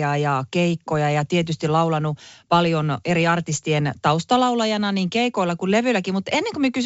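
No technical faults can be heard in this speech clip. It comes through G.722 wideband telephone coding, with the speech reaching up to about 7 kHz and any upper-band hiss faint at most, which fits the full 64 kbit/s mode.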